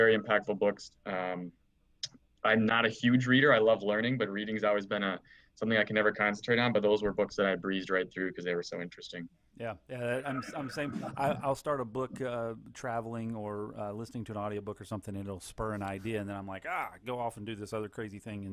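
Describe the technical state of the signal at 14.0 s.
Around 14.0 s the signal is intact, with nothing in it at that moment pointing to a technical fault.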